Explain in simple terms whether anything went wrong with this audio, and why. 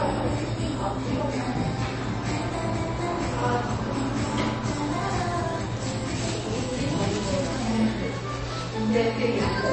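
MP3 compression throughout the clip: nothing above about 8.3 kHz and a watery, swirly texture, likely from an encoder short of bits dropping treble and weak details.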